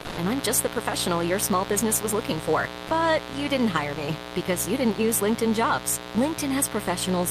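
A 60 Hz mains buzz runs through the whole clip, only about 10 dB below the speech. Sharp spikes at each half-cycle give it a harsh, raspy edge.

From 0.01 to 0.17 s, just before "and I'm just", the speech gives way to comfort noise. The likely cause is sound dropped by the voice detector.

At 2.87 to 2.89 s, after "business was looking for", there is another brief drop to comfort noise, again likely the voice detector cutting sound.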